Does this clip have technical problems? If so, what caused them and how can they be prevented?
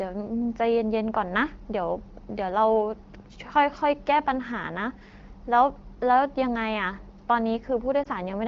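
Yes. From 8.03 to 8.08 s there is a brief dip or warble. These are lost AMR speech frames: a radio error made a frame fail its checksum, so the decoder repeated the last good pitch and vocal-tract settings at falling gain. The short length fits a single lost 20 ms frame. Unlike a hard dropout, it is not abrupt silence or a click but a softened, smeared dip. Better radio coverage and stronger channel protection, such as more robust codec modes when signal is weak, would prevent it.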